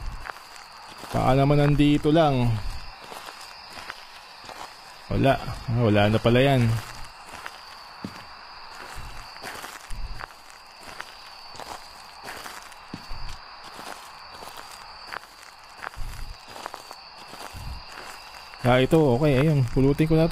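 From 2.47 to 6.47 s the audio drops to an adaptive stream at a lower bitrate: the player switched to a cheaper encoding as throughput fell, so treble is cut above 14.9 kHz and turns synthetic, consistent with HE-AAC near 20 kbit/s, with abrupt, gapless transitions.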